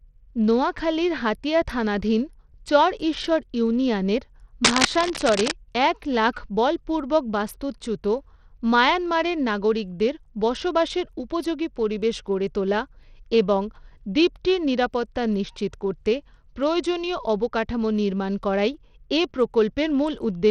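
Throughout the speech, the audio has likely passed through Bluetooth SBC compression with a starved bit pool, fitting a rate near 80 kbps. Its upper sub-bands get almost no bits, so the treble thins and flickers while a gritty, aliased grain clings to the voice.

From 4.64 to 5.52 s, cable scratch noise appears. A dense, uneven burst of scratching and rustling sits on top of the speech at roughly the same loudness, as though a worn connector or lead were being moved.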